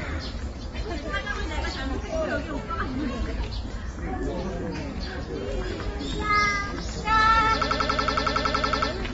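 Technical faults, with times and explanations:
throughout: AAC compression. The audio was likely encoded with AAC-LC at a low bitrate, around 24 kbps, which forces the encoder to drop detail the hearing model judges least important. Nothing remains above about 7.6 kHz, so the top end is cut away and the sound comes across dull and muffled. Damage from the quantisation is plainly audible, with smeared, watery textures on sustained and noisy parts.
7.62–8.92 s: system hang loop. The system stopped supplying fresh audio while the playback hardware kept replaying the same stretch of its buffer. A single 92.9 ms fragment, which fits a 4096-sample buffer, repeats 14 times at about 10.8 Hz. This produces a rapid mechanical stutter rather than a steady tone. Little or no audio seems to go missing; the sound just stalls in place until normal playback returns.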